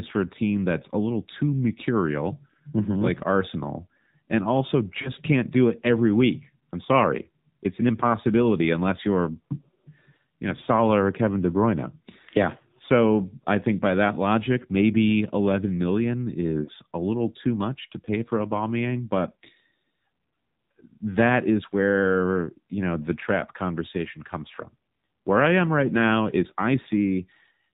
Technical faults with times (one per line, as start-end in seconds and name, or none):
0.00-27.74 AMR narrowband mobile codec
5.02-5.12 lost AMR speech frames
16.64-16.72 lost AMR speech frames